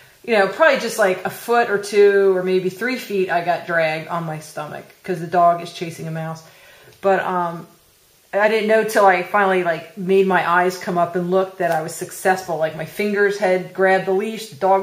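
Nothing in the audio stood out as a technical fault on listening.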